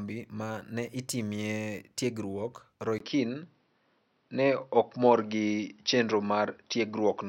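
At 2.98 s the speech drops out for about 20 ms, then returns duller and narrower, with nothing above 5.9 kHz, a level shift of around 5 dB and a faint new noise floor well under the voice. That's most likely the input switched to a poorer device, right through to the end.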